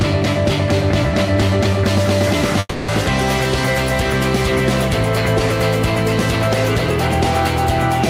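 At 2.59 s the sound stops moving forward and the last moment is stretched into a fading buzzy hiss for about 290 ms, dropping to a brief 20 ms silence before the audio resumes at 2.91 s exactly where it left off. This is a call audio freeze, likely caused by packets stalling in transit so the jitter buffer ran dry. Nothing is lost, but everything after it arrives roughly 290 ms later.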